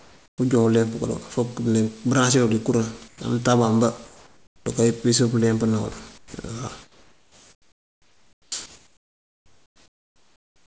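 From the start to 0.38 s, just before "ujo uleemp", and again at 3.08 to 3.20 s right after "dí kuraŋ", at 4.06 to 4.66 s, 6.18 to 6.34 s, 6.82 to 8.52 s and 8.66 s to the end, the pauses carry a flat, featureless hiss instead of the room's own background. The hiss is quieter than the real background, by about 6 to 15 dB. This is comfort noise in place of the background, likely because the sender's voice detector stopped transmission during pauses. The receiver then filled each gap with synthetic noise of roughly the right spectral shape, losing the detail of the actual room.

At 8.50 to 8.52 s, where the long stretch of synthetic hiss ends, the speech enters abruptly with no soft lead-in, as though its first instant were shaved off. About 20 ms is missing. This is an onset clipped by the voice detector, likely because the detector was slow to register that speech had resumed, so that opening fragment was never sent and comfort noise played in its place. 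The G.722 call path is audible in the band limit, with nothing above 8 kHz.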